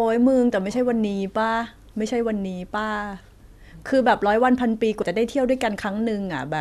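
At 5.02 s the speech jumps ahead by about 50 ms, consistent with two compressed frames of 26.1 ms being skipped, either lost from the file or rejected by the decoder as damaged.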